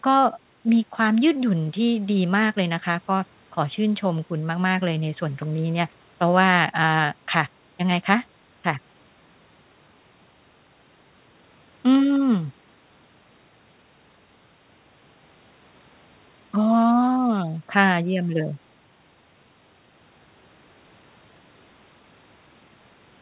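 No technical faults are audible.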